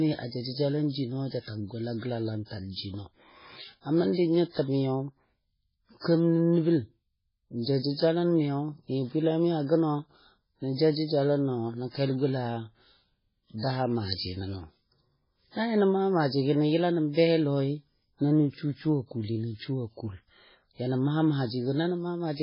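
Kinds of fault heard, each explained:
MP3 compression: The encoder was likely starved of bits, a budget this tight points to a very low rate around 16 kbps, so it discarded everything above about 5.3 kHz and zeroed the weaker frequency lines it judged inaudible. Those lines drop in and out from frame to frame, so the speech sounds dull, with metallic chirps on s sounds and a heavy watery, swirling texture that never settles across the clip.
pre-echo: The codec spread its quantisation noise across a whole transform block, and a sharp attack arriving late in one block dragged noise meant for the loud part into the quiet moment before it. At 6.00 s a short hiss rises for about 45 ms ahead of the onset, so the attack arrives softened and smeared rather than crisp.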